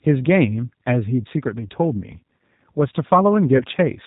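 From the start, the speech carries the signature of a G.729 codec, most likely the 8 kbit/s G.729A variant. The decoder rebuilds each 10 ms frame from a vocal tract filter, a pitch predictor and a sparse set of pulses, so the damage is plainly audible: the voice sounds rough and slightly synthetic, and nothing above 4 kHz survives, leaving a dull, band-limited top end.

At 3.57 s to 3.64 s there is VoIP packet loss concealed by the speech codec. About 20 ms of audio is missing, which fits a single lost packet. The decoder filled the gap by extending its last pitch and filter settings at falling gain, so the sound smears into a brief, fading buzzy tone or coloured noise. Because each frame depends on the one before, the voice stays weak or distorted for a short stretch after the gap, until about 3.64 s.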